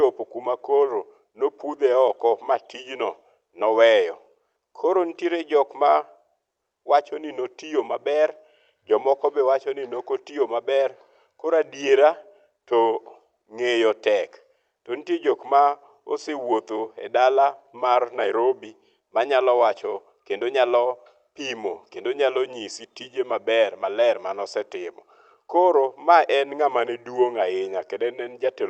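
No faults to report on this speech recording; it has come through a call codec and jitter buffer, with the top end stopping at about 8 kHz, consistent with a wideband Opus setting.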